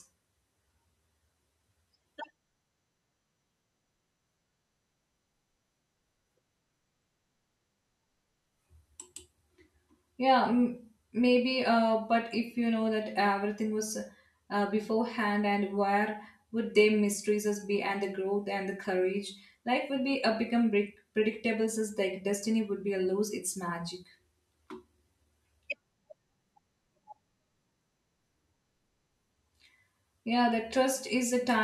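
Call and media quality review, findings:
No technical faults found in the speech signal: level, continuity and timing hold steady throughout, with nothing that points to a problem in capture, processing or transport.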